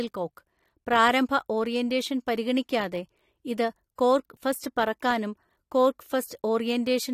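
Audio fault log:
3.96 to 3.98 s, pre-echo: A short hiss arrives about 27 ms before a sharp speech onset, and the attack sounds softened. The transform block spread its quantisation noise evenly. Noise sized for the loud onset leaked into the quiet gap ahead of it.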